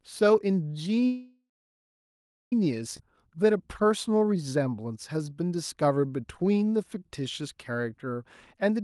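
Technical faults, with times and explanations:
1.06–2.53 s, call audio freeze: the sound stalls and is carried on as a fading buzz, then about 1.07 s of silence, 1.45 s in all. It resumes where it stopped with nothing lost, unlike a skip. Packets held up in transit likely emptied the jitter buffer.
2.97 s, skip ahead: playback jumps forward with only a 22 ms join, dropping roughly a second of audio. Unlike the freeze, there is no added pause; the earlier and later sound are butted together, cutting the built-up delay back down.
3.26–8.17 s, jitter buffer slow-down: the sound runs at 91% speed for almost five seconds, stretched by 464 ms through repeated single pitch periods. Pitch stays the same, so sounds are drawn out rather than lowered.
8.57–8.80 s, jitter buffer speed-up: a brief hurried stretch at 114% speed, with roughly 40 ms removed as short pitch-period pieces. Pitch is unchanged, and nothing jumps or goes missing as a block, which separates it from the skip ahead.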